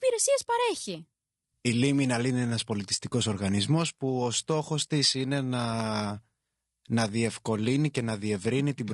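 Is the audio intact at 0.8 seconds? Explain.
No. At 0.8 seconds the speech carries low-delay AAC compression, and it runs through the whole clip. The voice sounds rough and grainy. Noise fills the gaps between the pitch harmonics, and the top band sounds lowered or synthetic. The likely cause is AAC-ELD, a low-delay codec used for calls. It works in very short frames, so it cannot resolve harmonics finely. The damage points to a low bitrate, around 32 kbps.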